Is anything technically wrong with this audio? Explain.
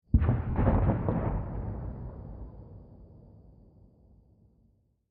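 Yes. There is one dropout. From 0.50 to 0.56 s, lost LE Audio frames leave a gap of about 60 ms. That fits six 10 ms frames going missing over the Bluetooth LE Audio link. The LC3 decoder fills the hole by repeating the last good spectrum with its signs randomised. Any tonal content turns into a brief noisy smear. After the first few frames the repeated spectrum fades, so the patch grows quieter before normal sound returns. The light lossy compression on the stream is working as intended.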